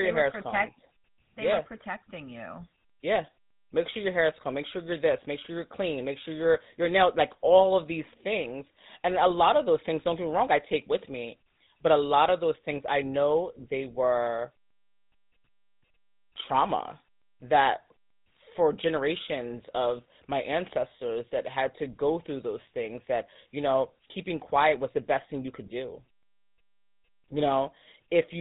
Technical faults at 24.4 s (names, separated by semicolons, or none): GSM full-rate codec